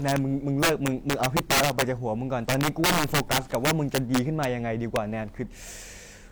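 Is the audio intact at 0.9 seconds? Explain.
No. At 0.9 seconds the speech is damaged by integer overflow, which runs through the whole clip. The signal is driven about 9 dB past full scale. A small fraction of samples exceed the limit and wrap to the opposite sign instead of being capped. Each one swings across the full range. Loud syllables break into violent cracks, harsher than ordinary clipping.

The same moment also carries stacked compression artefacts throughout. Swirly, smeared textures of two different kinds sit on top of each other, and nothing is heard above 20.4 kHz. This sound likely comes from transcoding between lossy codecs. It points to an MP3 pass near 96 kbit/s followed by HE-AAC near 48 kbit/s, with the later encoder spending bits on the earlier artefacts.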